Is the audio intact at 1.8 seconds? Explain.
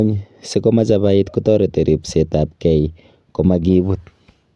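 Yes, the speech at 1.8 seconds is intact, with no audible dropout, click, distortion or other fault at that moment.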